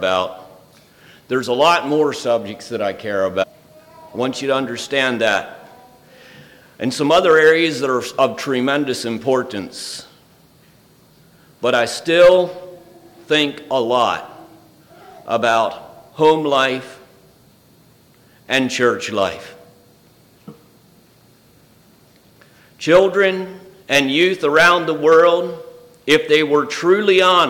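At 3.42 to 3.44 s, a brief burst of damaged data in the compressed stream: for roughly 24 ms the decoder is fed bytes it cannot parse as valid frames, loses its place and has to hunt for the next frame header before resuming. The result is a short glitch as the decoder drops and regains sync.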